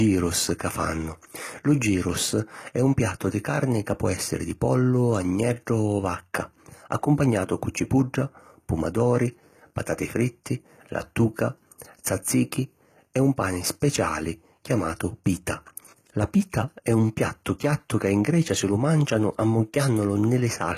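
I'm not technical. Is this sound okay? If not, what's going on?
No. Throughout, the s sounds come out gritty and lispy and the treble feels artificial, likely from HE-AAC compression rebuilding the top end rather than keeping it.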